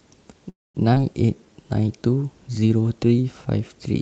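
A call audio freeze runs from 0.49 to 0.77 s. The sound stalls, with the last bit of audio carried on briefly before about 210 ms of silence, and then resumes where it left off with nothing lost. This is likely a jitter buffer that ran dry while packets were held up, inserting roughly a quarter-second gap.

A skip ahead follows at 0.95 to 0.97 s. Playback jumps forward over about 70 ms of audio, with only a tiny 8 ms join. A stretch of audio was dropped while later audio was already waiting, so part of a sound vanishes and its neighbours are butted together.

A jitter buffer slow-down covers 1.26 to 1.81 s. To rebuild its reserve, the receiver repeated short pitch periods, adding 76 ms and playing the passage at 88% speed. The pitch stays the same but sounds are drawn out. Throughout, the high end stops around 8 kHz, which fits Opus at a modest call bitrate.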